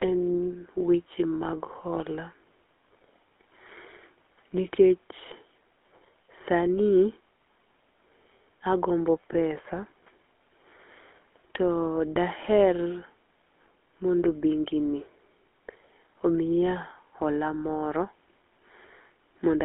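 GSM full-rate codec, throughout the whole speech clip. The speech has been squeezed through the original GSM coder, which rebuilds each voice from a vocal-tract filter excited by a regular train of pulses and discards much of the fine detail. Its damage is plainly audible as a buzzy, gravelly roughness. The band is confined to roughly 250 Hz to 3.5 kHz, removing both low body and upper brightness, and the sound fits a 13 kbps coding rate.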